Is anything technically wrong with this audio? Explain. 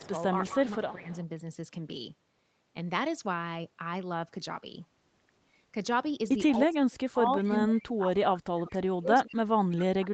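Yes. There are two kinds of fault.

The first is echo leak. Faint scraps of the speech repeat about 185 ms after the original, roughly 25 to 30 dB below it. They occur at 0.0–0.1 s, 0.9–0.96 s, 1.12–1.18 s and 8.7–8.77 s. The likely cause is a far end on a loudspeaker whose echo canceller left some of the returned signal in its microphone feed. That signal travelled back down the line as a delayed, weakened copy.

The second is speech suppressed in double talk. From 0.49 to 1.1 s, the speech dips in level for about half a second in all, by up to about 15 dB. From 6.53 s to the end, the dips go much deeper, up to about 35 dB, so parts of the speech nearly vanish. This likely happened because both sides were talking at once. The echo canceller could not tell the near talker from the loudspeaker echo, and turned everything down together.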